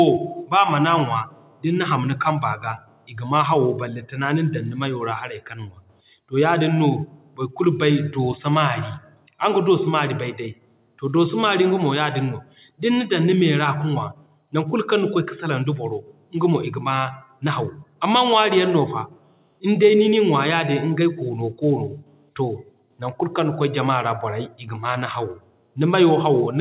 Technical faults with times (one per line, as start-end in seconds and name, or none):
none